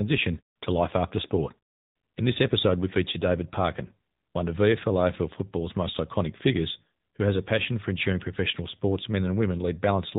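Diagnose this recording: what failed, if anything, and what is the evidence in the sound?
AMR narrowband mobile codec damage throughout the speech: nothing passes above 4 kHz, and the buzzy, synthetic pulse-driven vocal-tract model points to a low mode near 8 kbps.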